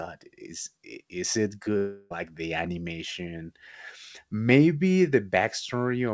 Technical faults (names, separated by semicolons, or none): long network dropout